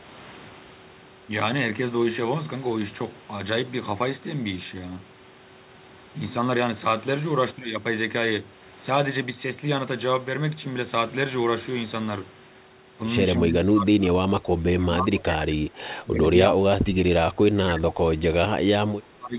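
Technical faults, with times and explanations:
13.38–15.8, 15.99–16.85, 17.21–18.24 and 18.47–19.37 s: speech suppressed in double talk. In each stretch the talker sinks by about 25 dB at the deepest. This is likely the echo canceller hearing both sides at once, failing to separate this talker from loudspeaker echo, and turning everything down. Unlike packet-loss gaps, these are long, uneven dips of up to two seconds rather than brief clean holes.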